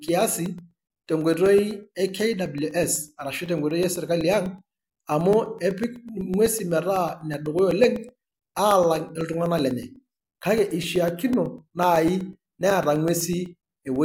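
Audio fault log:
0.08–13.96 s, periodic USB or driver dropouts: a short tick repeats every 0.125 s, eight per second, around a hundred in all. Each time a couple of milliseconds of the speech vanishes and is replaced by silence, as if something is blocking the USB bus or audio driver on a fixed schedule. Unlike random crackle from a loose cable, the spacing never varies, and the ticks disappear in pauses because there is no signal to interrupt.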